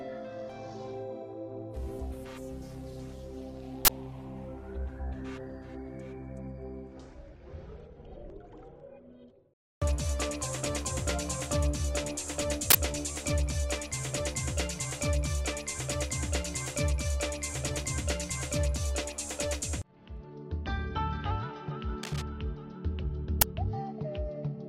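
At 3.85 to 3.89 s and 12.70 to 12.75 s, an uninitialised buffer plays leftover memory as a loud 43 ms digital noise burst. This fits a 2048-sample block. On the waveform it appears as a sudden dense slab, and on the spectrogram as a broadband vertical band. A shorter burst of about 11 ms at 23.41 s suggests a 512-sample block.

From 22.03 to 22.22 s, cable scratch noise, likely from a worn connector or control being moved, adds uneven scratchy rustling about 10 dB below the sound. It shows as ragged, speckled broadband energy.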